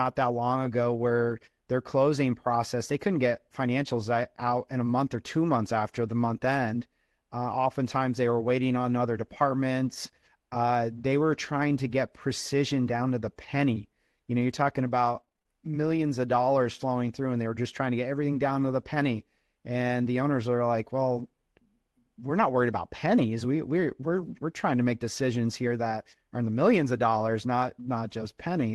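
At 10.97 s a single lost packet was rebuilt from error correction. The 20 ms frame that went missing was recovered from a lower-bitrate copy carried in the following Opus packet, so the sound runs on without a gap. That frame is rougher and noisier than its neighbours. The lack of a hole is what separates it from ordinary loss concealment: nothing is extended or faded, just a momentary coarsening.

From 15.01 to 15.60 s there is repeated packet loss, heard as a robotic sound. Seven gaps fall within that half-second, none longer than about 21 ms. Each one was patched by carrying the last sound forward, 109 ms in all, roughly a quarter of the span. The patches come in quick succession, giving a choppy, broken texture with pieces missing. That cluster is what tells it apart from the isolated, seamless repair at 10.97 s. The call path underneath is an Opus link cut off at 12 kHz, which fits a bitrate around 24 kbps.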